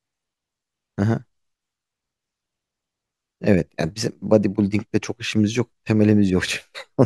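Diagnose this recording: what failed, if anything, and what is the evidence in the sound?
Crude rate conversion from 4.29 s onward: a faint inharmonic fizz, roughly 45 dB under the speech, fits unfiltered linear interpolation from 48 to 44.1 kHz.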